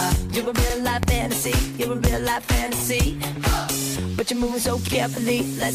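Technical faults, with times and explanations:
0.70, 1.74, 2.79, 3.83 and 4.88 s, overlapping chunks: a brief stutter repeats at a steady beat, as 44 ms of audio plays twice at each join. The stream was cut into 1.0 s chunks, and each chunk begins before the previous one finished, so the overlap replays.
1.03 and 2.07 s, loud pop: a single sharp pop lasting about 30 ms jumps out at each time, roughly 15 to 20 dB above the surrounding sound, which keeps running underneath. A sudden voltage step, likely from a switch, static discharge or a driver glitch, entered the signal path.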